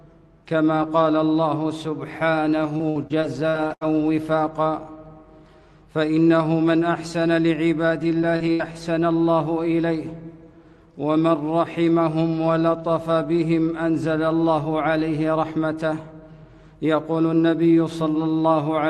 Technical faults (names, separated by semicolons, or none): repeated packet loss (robotic sound)